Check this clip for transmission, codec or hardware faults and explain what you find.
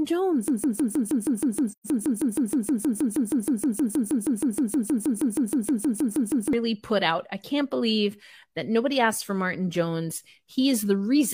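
Two faults stand out, and the second falls inside the first.

From 0.48 s to 6.53 s the sound stutters in place: one slice about 0.16 s long plays back to back, identical each pass, roughly 38 times, before normal speech resumes at "put out I can't". This is a broken-record loop. The likely cause is a stalled player, encoder or stream that kept resending the last buffered fragment, so six seconds of the original audio never arrived.

Between 1.69 s and 1.86 s the repeating pattern briefly drops out. The level fades down, sits silent, and fades back up with soft edges. This is AAC frame loss with muting. The decoder zeroed the spectrum of the missing material, and the overlapping transform windows smeared that silence into gentle ramps on both sides. The gap of about 128 ms fits three lost AAC frames.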